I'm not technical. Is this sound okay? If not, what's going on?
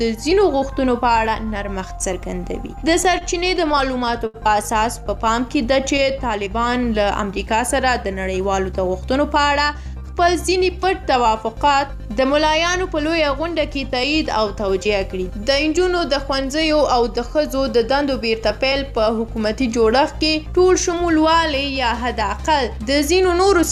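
No. From 2.57 to 4.36 s there are repeated stalls (stutter). The audio was arriving over the network late or more slowly than it was being played, so the player kept running out of sound to play. Ten times it bridged the gap by stretching out what it had just played, the longest pause about 73 ms, adding about 157 ms in total. Nothing is lost, but the sound hesitates and stutters through that stretch.

From 5.28 to 6.28 s there is a jitter buffer slow-down. The small reserve of audio the player keeps on hand was running low, so it rebuilt it by repeating tiny slices of sound many times in a row. That added about 42 ms, making the sound play at about 96% of its normal speed without changing its pitch. It comes across as slightly drawn out, perhaps with a faint wobble.

From 8.38 to 9.75 s there is a jitter buffer speed-up. This time the player had built up more stored audio than it wanted, which happens when delayed pieces arrive all at once. 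To catch up, it cut out very short slices of sound, about a tenth of a second in all. The sound plays at about 106% of its normal speed at the same pitch, so that passage feels a little rushed.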